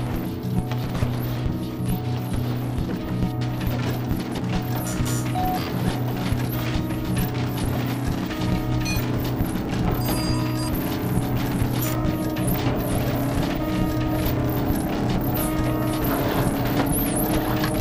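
Chunks out of order: 60 ms blocks arrived late and played after their successors at 0.84, 4.2 (two blocks late) and 11.4 s, giving brief jumbled moments.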